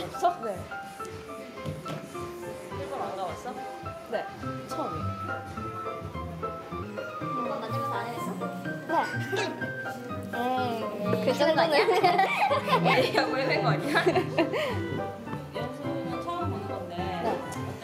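From 6.83 s to 12.94 s the audio suddenly turns hurried and higher, running about 1.19 times too fast, with pitch lifted roughly three semitones, before snapping back to normal pace and pitch. This is a section at the wrong speed: because tempo and pitch shift together and abruptly at both edges, the likely cause is that stretch being played out or resampled against the wrong clock rate, rather than any deliberate pitch effect.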